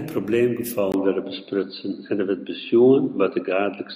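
Input switched to a poorer device at 0.92 s in this speech: after a 20 ms gap, nothing above 4.7 kHz remains, the level shifts by about 5 dB and faint new background noise appears, likely from a changed microphone.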